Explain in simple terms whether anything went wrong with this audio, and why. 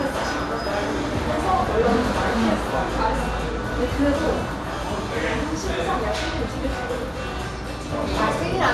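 Nothing went wrong here; it's just everyday sound coming through the way it was captured, with no glitches to point out.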